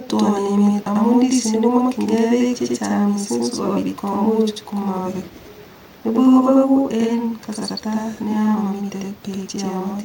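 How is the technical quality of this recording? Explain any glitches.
The recording has one fault that lasts the whole clip: a channel delay producing doubling of the speech.

From start to finish, one channel runs about 93 ms behind the other, which fits a 4096-sample buffer. When the two channels are folded down to mono, the late copy does not blend in. It arrives as a distinct second instance at equal level, so every syllable is followed by a slapback repeat, giving the speech a doubled, echoing quality.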